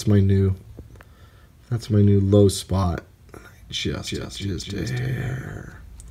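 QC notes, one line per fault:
4.07 s to end, doubled audio track: a second full-band copy of the sound enters abruptly and trails roughly 0.3 s behind, a few decibels quieter. It carries no decay or room colour. A slower second capture path likely mixed it in.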